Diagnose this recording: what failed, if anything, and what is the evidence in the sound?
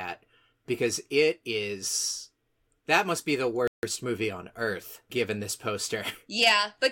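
A Bluetooth stall at 3.68 to 3.83 s, in the wireless link to playback: after "must be the", the speech drops to about 156 ms of silence, then resumes with "movie on earth given". Interference likely delayed packets until the headphones' buffer emptied.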